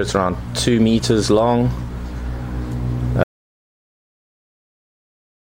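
At 3.23 s the sound stops abruptly and stays silent to the end of the clip, about 2.2 s later: an audio dropout to silence. The input was most likely lost, through a disconnected source or failed link, while recording carried on writing zeros. It differs from a fade-out or noise gate because nothing tapers and no room tone or hiss remains. The gap is dead digital silence, and whatever followed is missing.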